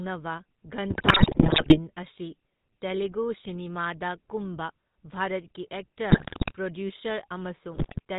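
From start to finish the speech carries the GSM full-rate codec's signature. The voice is band-limited to below 4 kHz and has a buzzy, gravelly grain, which fits the old 13 kbps full-rate coder. It models the vocal tract and drives it with a sparse, regularly spaced pulse excitation. Unlike a plain low-pass telephone band, which is dull but smooth, this roughness sits inside the voiced sounds themselves and is plainly audible.

From 0.9 to 1.79 s, ending just before "ꯑꯁꯤ ꯇꯦꯂꯨꯒꯨ ꯁꯤꯅꯦꯃꯥꯗ ꯀꯨꯝꯕ", GSM bit errors break the speech into squawks, pops and gargling. The same happens from 6.1 to 6.52 s, right after "ꯇꯦꯂꯨꯒꯨ ꯁꯤꯅꯦꯃꯥꯗ ꯀꯨꯝꯕ ꯚꯥꯔꯠꯀꯤ", and again from 7.74 to 8.0 s. The damage points to several percent of bits flipped on a weak link. Corrupted filter, pitch and gain values warp the spectrum and make the level jump frame by frame. Lost packets leave gaps or smeared repeats, but here the decoder keeps producing sound, and that sound is garbled and erratic.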